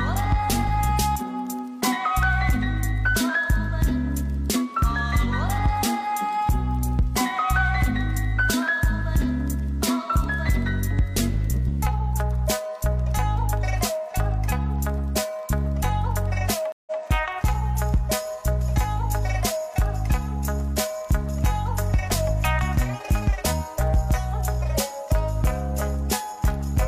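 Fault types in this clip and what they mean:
Stream reconnect: the connection dropped near 16.72 s and the player fell silent for about 144 ms. When it reconnected it started a new decoder partway through the stream, and the server resent a short burst. Because of that, the audio picks up again at a point about 139 ms earlier than where it broke off, so a fragment is heard twice. The whole disruption is over by about 17.01 s.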